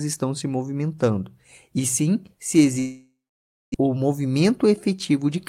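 A long network dropout runs from 2.79 to 3.76 s, right after "movimentando e sim se". The speech breaks off and the last sound is stretched into a fading buzz, then about 0.58 s of near silence follows before speech resumes. Roughly 0.6 s of speech is gone, never played. The likely cause is a stall in packet delivery, with the audio rejoining noticeably later than before, by around a third of a second.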